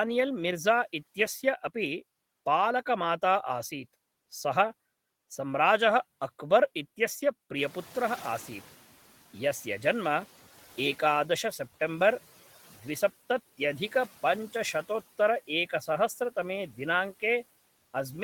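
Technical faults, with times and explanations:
7.55 to 10.43 s, noise suppressor catching up: the room noise jumps by about 14 dB at around 7.5 s, and the suppressor's noise estimate takes 2.88 s to follow. The louder background passes through with less reduction at first, then sinks by about 9 dB once the estimate adapts.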